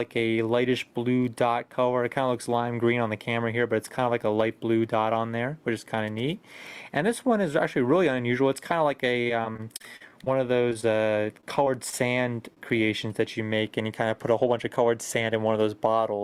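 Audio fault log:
9.21–10.28 s, repeated packet loss (robotic sound): the audio turns choppy, with pieces dropping out. Nine gaps in about a second, the longest 42 ms, each patched by extending the previous sound, so about 21% of this stretch is synthetic fill and 180 ms is gone.
10.70–10.73 s, short concealed packet loss: a brief smear where 20 ms never arrived. The receiver carried the last sound forward for 11 ms and blended back into real audio.
10.73–10.77 s and 10.81–10.85 s, short stall from a late packet: a sound is held a touch too long, twice in quick succession. Each time the jitter buffer ran dry, so the receiver stretched the last sound by 18 ms until the packet came, and nothing was lost.
11.41–11.94 s, repeated packet loss (robotic sound): another choppy patch, shorter than the first. Four gaps, the longest 25 ms, were filled by continuing the prior sound. About 14% of the span is concealment and 40 ms of real audio is missing.
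12.54–12.59 s, short stall from a late packet: one sound lingers briefly. A packet was late, the buffer emptied, and the receiver extended the last sound by 25 ms before resuming at the same point without losing anything.
14.30–14.77 s, jitter buffer speed-up: the audio sounds hurried, running at 109% speed with pitch unchanged. The buffer had built up excess delay, so the receiver trimmed around 50 ms as many small pitch-period slices to catch up.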